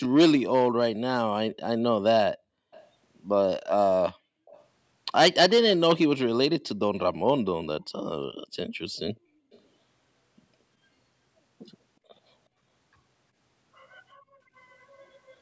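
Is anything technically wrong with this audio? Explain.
Yes. An echo leak appears at 0.03 to 0.08 s, 2.72 to 2.89 s, 4.46 to 4.65 s and 9.52 to 9.61 s. A delayed copy of the speech, about 365 ms late, slips back in as brief scraps. The first is fairly strong, about 15 dB below the speech, and the later ones are faint, around 30 to 35 dB down. This is likely a far-end loudspeaker whose echo canceller missed part of what its microphone picked up. The call's microphone processing trims the lowest bass and tops out at 8 kHz, as expected.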